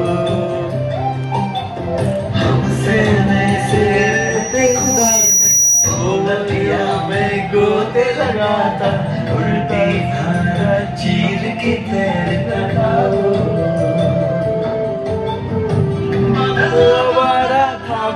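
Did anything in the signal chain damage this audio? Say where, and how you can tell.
Yes. From 4.00 s to 6.27 s a single piercing tone at about 5.8 kHz swells over roughly a second and a half until it sits a few decibels above the rest of the sound, then stops. That is loudspeaker feedback squeal, arising in the acoustic loop between playback and capture: the microphone was hearing its own loudspeaker, and at 5.8 kHz the round-trip gain exceeded one, so that frequency fed on itself.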